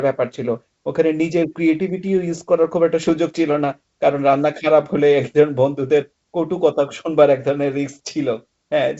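Speech carried over a G.722 wideband link. From 3.03 to 3.13 s, bit errors on the ADPCM link cause pops and a rough burst. The flipped bits upset the decoder's step size and predictor.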